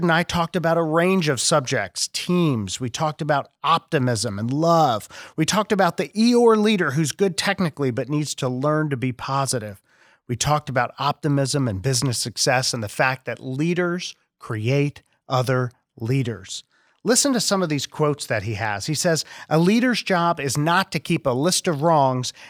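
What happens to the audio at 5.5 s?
Nothing goes wrong at 5.5 s; the audio plays through that moment intact, with no dropout, click, glitch or other fault.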